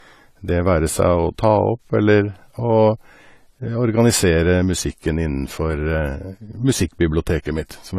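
A speech recording that is likely low-bitrate audio saved at a high bitrate: it keeps the artefacts of a low-rate encode, which fits a file from roughly a 32 kbit/s AAC stage later re-saved as a large MP3. A spectrogram shows a flat ceiling at 14.1 kHz with nothing above it throughout.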